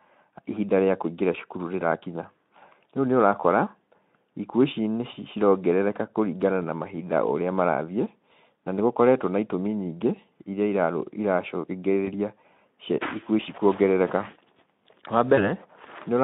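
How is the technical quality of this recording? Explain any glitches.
Two brief dropouts mar the recording, both heard through a narrow telephone-style band of roughly 150 Hz to 3.6 kHz that carries light Speex coding roughness.

VoIP packet loss concealed by the speech codec occurs at 12.06 to 12.08 s and again at 15.35 to 15.52 s. Each time one 20 ms frame went missing, and the decoder filled the gap by extending its last pitch and filter with falling gain. The first is a short smear. The second lingers for about 0.17 s because each rebuilt frame leans on the previous one, leaving the sound weak or distorted after packets resume.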